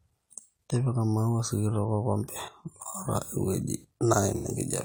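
It's a speech clip with one AAC frame loss with concealment near the end, from 4.36 to 4.47 s. For roughly 85 ms the decoder rebuilds audio from the last good spectrum, leaving a brief smeared, noisy patch. That length fits two lost frames.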